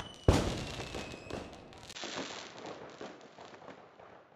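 At 1.93 s the sound cuts out for about 20 ms, then returns duller and slightly quieter, roughly 5 dB down, and stays that way to the end. Nothing above 7.6 kHz gets through, and a faint new background noise appears well beneath the sound. This is likely the input switched to a poorer device. A filter or codec narrowing the band would not also bring the brief gap, a different level and a different noise floor together at one instant.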